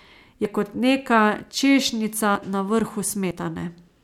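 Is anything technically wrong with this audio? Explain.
Yes: audio missing between chunks, at 0.45 s (just before "kot neka"), 1.40 s (right after "kot neka") and 3.31 s. At each point roughly 50 ms of speech vanishes, and the surrounding audio is butted together with no silence, so the speech jumps forward. The skips land on a steady grid that fits roughly one-second chunks, likely from material lost as one block closes and the next opens. That lack of a silent gap distinguishes it from a dropout.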